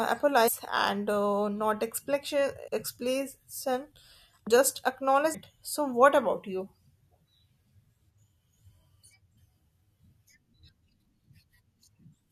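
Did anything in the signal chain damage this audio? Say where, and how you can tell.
Yes. The damage sits at the codec decode stage. Whole compressed frames are skipped at 0.47, 2.67, 4.46, 5.33, 8.17 and 9.37 s. At each point the speech jumps forward. The gaps are roughly 150, 100, 300, 200, 150 and 150 ms. The jump sizes fit whole multiples of a 21.3 ms codec frame. Frames were missing or rejected as corrupt, so the decoder dropped them.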